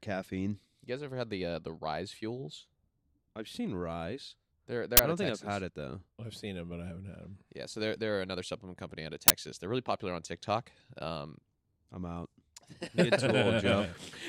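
At 4.97 to 4.99 s and again at 9.28 to 9.30 s, the speech is cut by a loud burst of digital noise. Each is an uninitialised buffer. The block played before audio was written, so leftover memory came out. Each lasts 21 ms, which fits a 1024-sample buffer.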